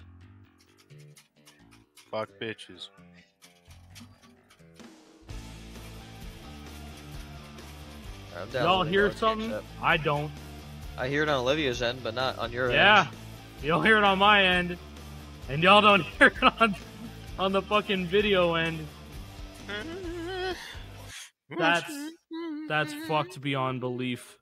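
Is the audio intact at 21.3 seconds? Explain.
Yes, the audio at 21.3 seconds is intact, with nothing there that breaks, distorts or interrupts the sound.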